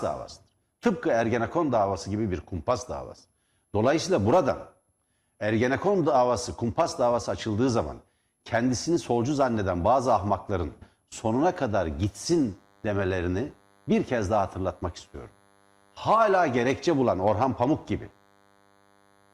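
From about 11.8 s right through to the end of this speech clip there's DECT cordless phone buzz, a steady, thin buzz sitting well under the speech, roughly 35 dB down. It repeats at 100 Hz, a burst every 10 ms, which is the giveaway. A DECT handset or base station close by is transmitting those short radio pulses, and something in the audio circuit is rectifying them, so each burst turns into a click and the train becomes a harmonic-rich drone.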